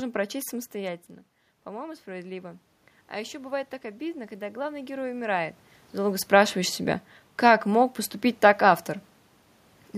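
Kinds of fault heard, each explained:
Automatic gain rising: just after "прочесть самостоятельно", the voice and the room noise swell together from 1.64 to 5.5 s, climbing about 8 dB. The input had dropped about 12 dB, so the gain control slowly turned itself up to compensate.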